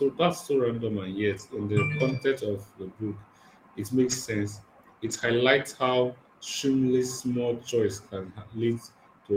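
Speech, with three short stretches at 1.33–1.39 s, 3.99–4.13 s and 5.05–5.39 s where lost packets were rebuilt from error correction: no gaps, just rougher, noisier low-bitrate copies standing in.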